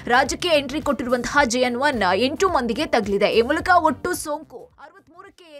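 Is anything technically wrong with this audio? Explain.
Yes. From 4.04 to 4.81 s there is zipper noise: the level falls by roughly 25 dB, but in discrete unsmoothed steps, around two hundred a second, so each jump leaves a tiny click and the fade carries a fine buzzing tick. On the waveform the envelope descends as a staircase; a spectrogram shows broadband vertical striations across that span.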